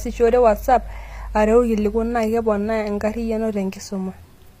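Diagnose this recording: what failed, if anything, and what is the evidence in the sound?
The codec stage failed, most likely through HE-AAC compression. Throughout the speech, the s sounds are gritty and metallic, and the top end sounds synthetic rather than detailed. Nothing is present above 15.4 kHz. The upper band appears to be regenerated by spectral band replication, with lower harmonics copied upward under a coarse envelope, so they no longer align with the true partials. The plainly audible damage fits a low bitrate of around 24 kbps.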